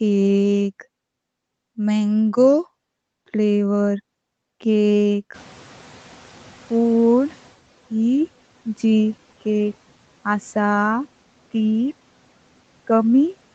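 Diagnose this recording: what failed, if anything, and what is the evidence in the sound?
The noise suppressor is catching up, a call-processing fault. The room noise jumps by about 23 dB at around 5.5 s. From 5.34 s the new noise passes at first with little reduction. The suppressor's noise estimate lags and only sinks the noise by about 9 dB at 7.56 s, after 2.2 s of adaptation.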